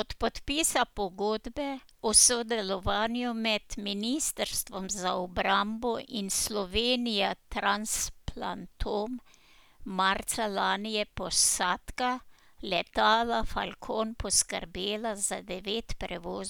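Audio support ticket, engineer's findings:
No audible faults found in the speech recording. Nothing to escalate from the listening check.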